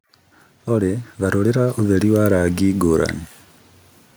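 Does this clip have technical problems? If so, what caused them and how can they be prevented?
Yes. Automatic gain rising runs from 0.67 to 2.88 s: the gain control judged the input too quiet and lifted it by about 5 dB over two seconds. The background swells with the speech, unlike a talker moving closer. Prevent it by disabling automatic gain and setting a fixed input level.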